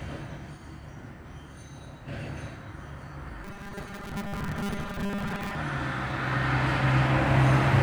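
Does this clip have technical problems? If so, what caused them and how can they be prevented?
Yes. Robotic sound from repeated short buffers runs from 3.44 to 5.57 s, where the audio turns into a rigid, metallic buzz pitched at 200 Hz. The likely cause is audio arriving too slowly, so the playback software kept looping its most recent fragment, about 5 ms long to match that pitch, while roughly half of the real audio was skipped. Preventing it means giving the delivery path enough buffering and processing headroom that playback never runs dry.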